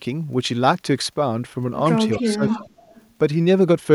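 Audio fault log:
2.07–2.72 s, speech suppressed in double talk: with both sides talking at once, the echo canceller likely could not tell its own talker from loudspeaker echo and turned both down. The speech dips by up to about 20 dB, across roughly 400 ms in total.
2.12–2.31 s, 2.47–2.59 s, 2.90–3.05 s, echo leak: the far end's echo canceller likely left part of its loudspeaker pickup unremoved and sent it back. Short delayed copies of the speech trail 257 ms behind, about 20 dB down in the first two scraps and about 30 dB down in the last.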